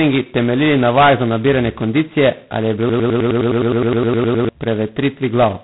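A speech recording coded with G.726 ADPCM at 16 kbit/s, which uses very few bits per sample, so a harsh, rasping hiss tracks the speech level and nothing above 3.9 kHz survives. From 2.89 to 4.49 s a broken-record loop occurs, likely from a stalled player or stream resending its last fragment: a 0.1 s piece repeats back to back about 15 times, and the audio due in that span is lost.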